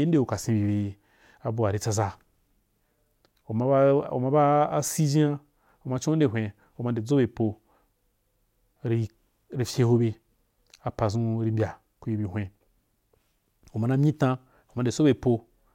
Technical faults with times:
none

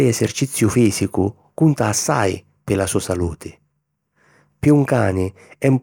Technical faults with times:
none

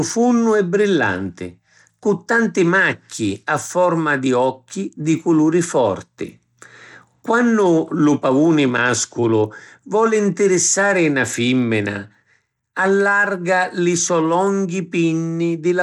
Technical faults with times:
0.00-15.82 Bluetooth SBC compression

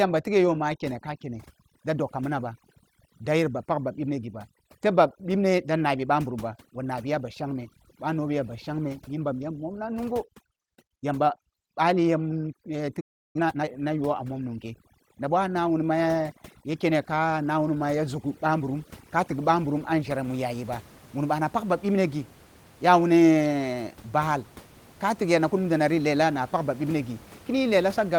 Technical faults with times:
0.00-20.24 overdone noise removal
13.00-13.36 playback stall
13.36-13.70 time-compressed catch-up

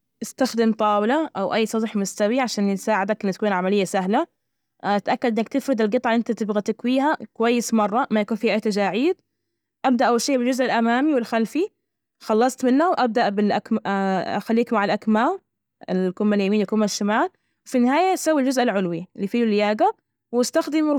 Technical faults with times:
none

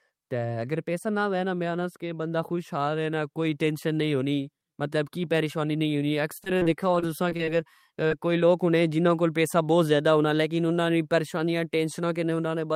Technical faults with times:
6.37-7.49 repeated packet loss (robotic sound)
8.07-8.13 short concealed packet loss

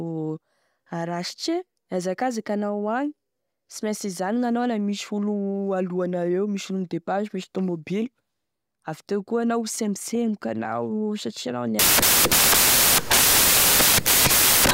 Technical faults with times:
11.79-14.73 samples built from the wrong bytes

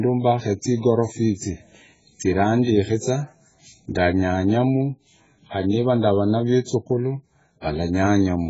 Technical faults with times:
0.00-8.50 AAC compression

